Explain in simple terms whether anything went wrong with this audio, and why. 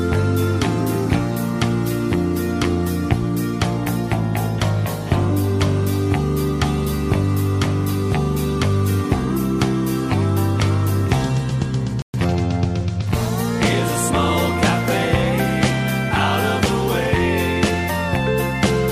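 At 12.02 s the audio cuts out for 120 ms, a playback stall. The sound drops to silence mid-flow and resumes at 12.14 s. The likely cause is the player running short of incoming data, or its processing being briefly held up, so nothing reached the output.

From 12.14 s to 12.38 s comes time-compressed catch-up. To recover the lost ground, the player trims small slices and blends the joins, so this stretch plays about 1.5 times faster, at unchanged pitch.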